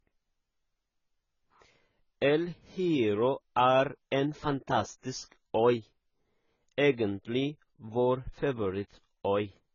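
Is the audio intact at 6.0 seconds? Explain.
No. At 6.0 seconds the speech carries AAC compression damage, and it runs through the whole clip. Nothing is heard above 7 kHz, so the sound is dull and muffled. The damage is heavy, with a smeared, warbling texture and fizzy sibilants. This is likely AAC-LC coding at a very low bitrate, which fits roughly 16 kbps. At that rate the encoder drops the top of the spectrum and quantises the rest coarsely, leaving holes.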